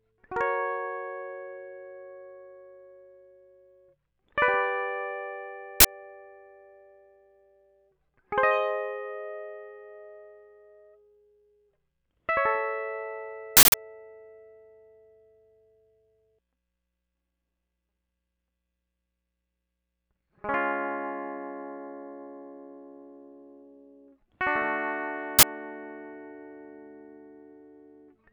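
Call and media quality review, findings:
Uninitialised buffer in music playback: loud cracks or digital-noise bursts at 5.80–5.85 s, 13.57–13.74 s, 25.39–25.43 s (43, 171, 43 ms), fitting 2048- and 8192-sample blocks of stale memory played before audio was written.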